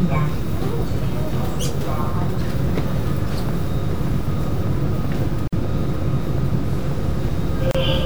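From 4.67 s to 7.89 s a train of clicks runs over the sound: about twenty evenly spaced pops at 5.44 per second, peaking roughly 5 dB above the signal, likely interference or a faulty connection. A spectrogram shows thin, regularly spaced full-height vertical lines, and a waveform shows matching spikes.

At 5.48 s and 7.71 s a gap at a join of encoded pieces opens: gaps of 49.6 ms and then 33.8 ms, where leftover encoder start delay and end padding interrupt continuous sound before it resumes. Each gap appears as a blank vertical stripe with smeared edges.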